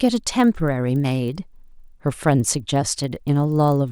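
Resampler restarted on every block, throughout the speech: each 40 ms block was converted separately, likely upsampling from 24 kHz to 48 kHz, so every block edge lacks its true neighbouring samples. The resulting errors form a 25 Hz ticking buzz, present only while speech sounds.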